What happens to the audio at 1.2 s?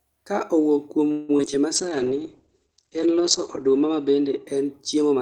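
Repeated packet loss (robotic sound), 1.11 to 1.54 s: five gaps patched by extending earlier audio sound choppy, and a spectrogram shows frozen, smeared streaks.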